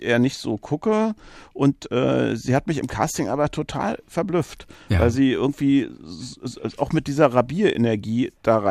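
Nothing in the speech stood out as a technical problem on listening.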